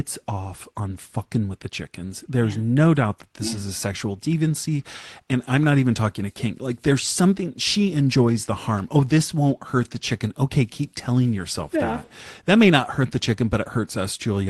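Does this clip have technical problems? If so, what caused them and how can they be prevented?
No, this speech came through a WebRTC call path with its Opus coding and top end near 12 kHz, which is just what a normal call sounds like, so there's nothing here to fix or prevent.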